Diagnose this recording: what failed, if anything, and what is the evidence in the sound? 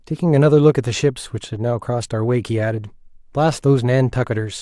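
Nothing failed here, and the sound of this speech recording offers no evidence of a fault at any stage.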